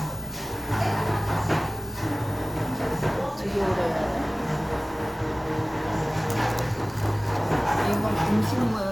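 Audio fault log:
No technical faults turn up anywhere in this recording of sounds. There is nothing to log for this clip.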